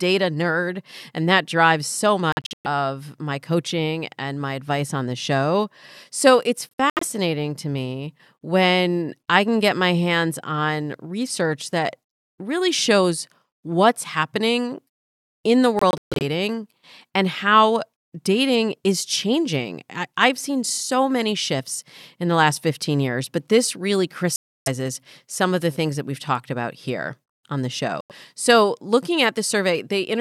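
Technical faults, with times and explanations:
2.32–2.66 s, 6.76–7.03 s, 15.79–16.22 s, 24.36–24.68 s and 28.01–28.12 s: Bluetooth dropout. The speech drops to silence. In the first three events the silence is broken into clusters of short holes spread over 0.33–0.42 s, with the longest single gap 0.14 s. The last two are near-solid gaps of about 0.30 s and 0.09 s. Each time the speech comes back further along, as though it had kept playing. The likely cause is packets reaching the headphones too late and being discarded.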